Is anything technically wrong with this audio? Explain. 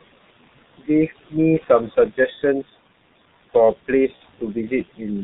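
Yes, there are three faults. Throughout, there are noise suppressor artifacts. Room noise sits about 17 dB under the speech, and the suppressor pulls it down about 17 dB between phrases and lets it return beneath them. That makes a pumping floor, rather than the steady hiss of unprocessed noise.

Also throughout, the G.723.1 codec leaves speech muffled and hoarse with smeared consonants. Nothing comes through above 4 kHz, which fits a low rate near 6 kbit/s. Unlike simple band-limiting, its slow voice-model updates roughen the sound itself.

From 4.16 to 4.21 s there is VoIP packet loss concealed by the speech codec. The decoder extends the previous sound into a brief, fading buzzy tone or coloured noise, consistent with one lost 30 ms frame. Unlike a clean dropout, it fills the gap rather than leaving silence.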